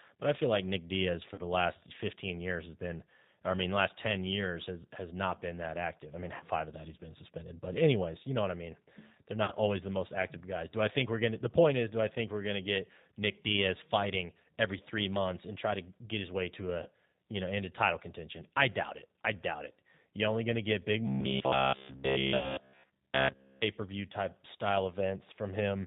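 G.729 codec damage runs through the whole of this 26-second speech recording. At 8 kbit/s the codec rebuilds speech from a vocal tract filter, a pitch predictor and a few pulses per frame, and it passes nothing above 4 kHz. The result is plainly audible: a narrowband, slightly rough and synthetic quality in place of natural speech. VoIP packet loss concealed by the speech codec occurs at 1.34 to 1.41 s, 6.37 to 6.43 s, 9.44 to 9.52 s and 16.83 to 16.88 s. About 40, 30, 40 and 30 ms of audio are missing there, which fits runs of three or four lost 10 ms frames. A longer gap at 22.37 to 22.60 s loses about 70 ms spread over 100 ms, with the longest run 60 ms. The decoder extrapolates from its last pitch and filter while lowering the gain, so each gap stretches into a fading buzzy tone or coloured noise. Because every frame builds on the one before, the speech stays weak or distorted briefly after the real packets resume. 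Robotic sound from repeated short buffers covers 21.07 to 23.62 s. Essentially all of that stretch is a rigid, metallic buzz at about 66.8 Hz that still roughly tracks the speech. That pitch corresponds to a repeat period of about 15 ms. This likely comes from audio arriving too seldom, with the playback filling the wait by replaying its last short buffer while fresh audio is skipped.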